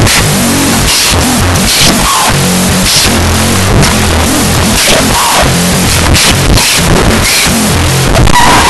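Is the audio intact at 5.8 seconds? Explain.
No. At 5.8 seconds the clip shows a wrong sample width, present throughout: 16-bit speech data read as unsigned 8-bit. Each sample splits into two values, only half carrying the real high byte. The speech plays at half speed, an octave low, buried in loud noise.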